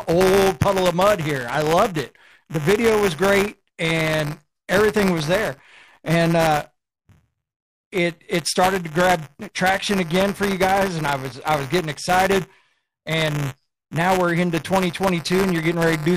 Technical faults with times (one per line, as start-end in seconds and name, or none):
0.00-16.17 buffer tearing